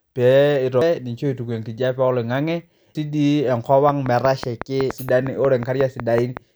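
Damaged data in the compressed stream at 0.82 s, 2.95 s and 4.90 s produces brief glitches in this speech clip, where the decoder misreads corrupted frames and resyncs at the next header. A train of clicks runs from 3.89 s to 6.38 s: about fifteen evenly spaced ticks at 5.4 per second, peaking about 15 dB above the speech, likely from electrical interference or a faulty connection.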